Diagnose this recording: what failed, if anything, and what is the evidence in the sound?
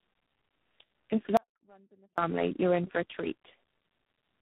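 The fault is tandem speech coding, at the codec stage. Throughout, the speech is rough, muffled and warbly, with nothing above 3.8 kHz. A single narrowband codec would not sound this worn. The damage points to three low-rate speech coders in series, ending in something like G.726. The call was decoded and re-encoded at each link border. Each coder then worked on the previous one's errors, so the artefacts stacked.

There is an audio dropout to a faint residue from 1.37 to 2.18 s. About 0.81 s of signal is lost. The gap is not silent. A faint sound remains, roughly 35 dB below the speech. The cut is abrupt at both edges, with no fade, and speech resumes on "you're in for a". The path after the break stayed live while the wanted signal vanished. That points to a network or transmission interruption as the likely cause.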